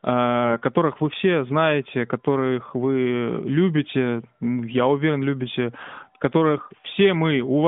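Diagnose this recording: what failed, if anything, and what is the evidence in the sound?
The failure is at the network stage: AMR bit errors on the radio link. From 5.78 to 5.92 s the audio turns briefly hoarse and gargly, but level and pitch hold. That span fits about seven 20 ms frames. Flipped bits landed in the weakly protected parts of each frame, so the checksum still passed. The decoder then placed its excitation pulses wrongly and misread fine gain and spectral values. The rest of the clip is plain narrowband AMR audio, capped near 3.6 kHz.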